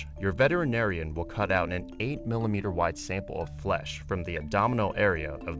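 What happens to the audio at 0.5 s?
Nothing goes wrong at 0.5 s: the audio there carries on intact, with only the band-limited character of a wideband call codec that has no content above 8 kHz.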